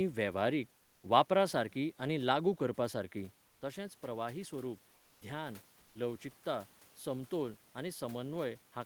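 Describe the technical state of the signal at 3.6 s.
At 3.6 s, comfort noise in place of the background runs from 3.47 to 3.61 s, likely from discontinuous transmission substituting synthetic noise for the real room sound. The 140 ms gap sounds flat and about 3 dB quieter, showing as a smooth, featureless band on a spectrogram and an even, slightly lower waveform floor.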